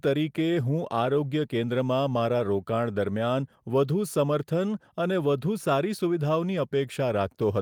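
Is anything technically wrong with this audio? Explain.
No, nothing in this speech recording points to a technical fault.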